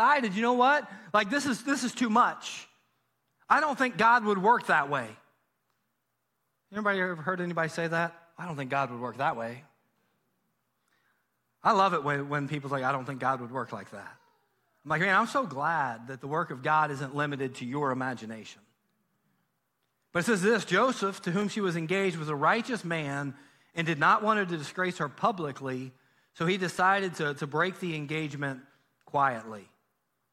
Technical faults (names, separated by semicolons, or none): clock drift buffer slips